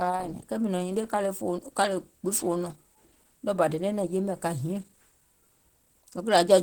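From start to finish the speech carries a muffled, hoarse quality, with a rough, grainy edge on voiced sounds. That points to Opus compression, likely at a low rate around 16 kbps, where the encoder drops into its hybrid speech mode. The lower band gets a speech-style model and the top is filled in coarsely, so the damage is plainly audible. The bandwidth still reaches about 20.2 kHz, so the loss is texture rather than dullness.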